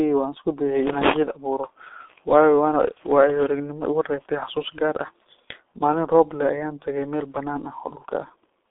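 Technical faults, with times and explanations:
Throughout: G.723.1 codec. The speech is muffled and hoarse for the whole clip. Nothing is heard above 3.6 kHz, and the band sits roughly between 250 Hz and 3.5 kHz, like an old phone line. Consonants smear because the codec codes sound in 30 ms frames and updates its voice model slowly. The heavy roughness points to a very low rate, near 6.3 kbit/s, too little for fine detail.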